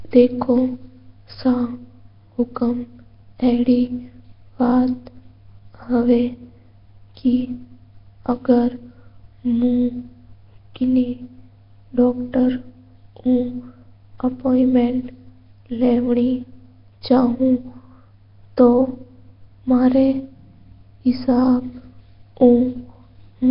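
From start to finish the speech carries a rough, hissy halo and a smeared, underwater feel, which is likely Nellymoser compression, the old Flash microphone codec. It spends a fixed, tiny bit budget on short blocks, so quieter bands get nothing and are patched with noise, hence the fizz around each syllable. Nothing comes through above about 5.3 kHz, and the damage is heavy, pointing to a rate somewhere near 22 kbps.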